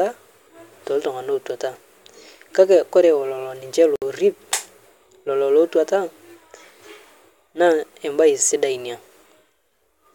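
At 3.96 s, just after "kake kore lolonishe", separately encoded pieces were joined without trimming the encoder's start delay and end padding, leaving a gap at a join of encoded pieces: a 62 ms gap with smeared edges, after which the speech resumes where it stopped.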